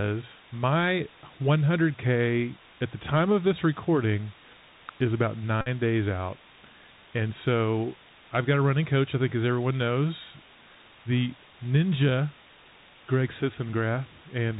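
Throughout, the speech was reduced to very few bits, which fits 6-bit audio, with dither added first, so a constant even hiss sits about 20 dB below the voice, a case of low bit depth with dither. The Bluetooth CVSD headset codec also runs throughout. It encodes one up-or-down bit per sample, which fits a 64 kbps link, so nothing above 4 kHz survives, sibilants turn scratchy, and granular hiss lies beneath. From 5.61 to 5.68 s, between "is about" and "days out", a Bluetooth headset packet repeated. Lost packets were replaced by the last one decoded again, with about 49 ms missing, and this produces a brief buzz near 267 Hz.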